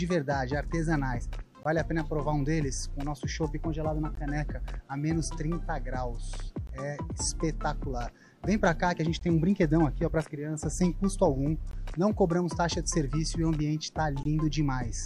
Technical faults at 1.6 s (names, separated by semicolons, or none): gap between chunks